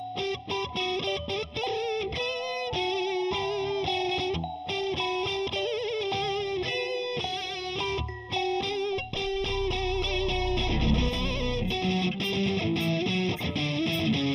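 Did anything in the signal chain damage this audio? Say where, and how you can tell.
Yes, there's channel delay causing comb filtering across the whole clip, start to finish. It sounds hollow and a bit phasey, with a fixed dip that sits around 1.5 kHz and further notches stacked evenly above it. That pattern points to one channel lagging the other by roughly a third of a millisecond, just a handful of samples, before the pair got folded to mono, so everything they share cancels at those regularly spaced frequencies.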